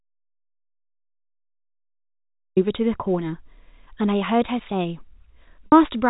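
From the very start until 2.57 s the speech is absent, a complete audio dropout to silence with no room tone. The input was likely cut off while the recorder kept writing silence. On a waveform this is a dead flat line, and on a spectrogram a blank band before the speech appears abruptly.

At 5.66 s to 5.72 s, about 60 ms goes missing, which points to three lost packets. This is packet loss with pitch repetition: the receiver loops the last pitch period and fades it down, giving a brief held, buzzy tone. A spectrogram shows frozen harmonic stripes tapering off, and the waveform shows identical repeated cycles shrinking. The G.711 telephone coding holds everything below 4 kHz.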